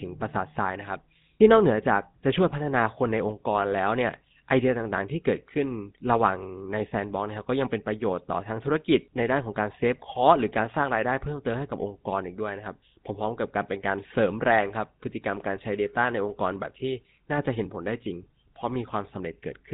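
Throughout the speech, GSM full-rate codec damage is plainly audible: the vocal tract is modelled and excited by sparse regular pulses, giving a buzzy, gravelly roughness, and nothing passes above 3.8 kHz. That grit, which fits a 13 kbps stream, separates it from simple telephone-band filtering.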